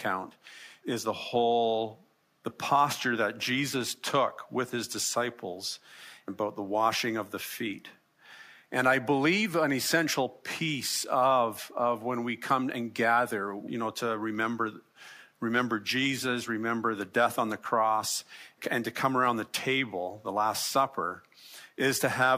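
No technical faults can be heard anywhere in the recording. Nothing in it breaks, drops out or distorts at any point.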